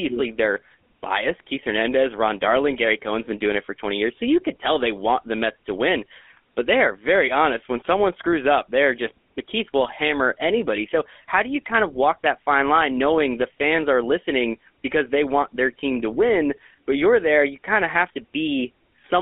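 Throughout, the speech has passed through the GSM full-rate codec. The coder rebuilds the voice from a vocal-tract model driven by a sparse, regularly spaced pulse train, so fine detail in the excitation is lost. The result is a plainly audible buzzy, gravelly roughness over every stretch of speech, and the sound is held inside a narrow 250 Hz to 3.5 kHz line band. This fits the 13 kbps full-rate coder.

From 7.78 to 7.86 s, just before "screws up they're just", GSM bit errors corrupt the decoder's filter, pitch and gain values, which points to a handful of damaged frames. The spectrum bends and the level lurches, giving a brief squawk and gargle. A longer burst follows from 9.81 to 9.93 s, where the corruption seems to span about twice as many frames and the speech breaks into pops and gargling before the decoder recovers.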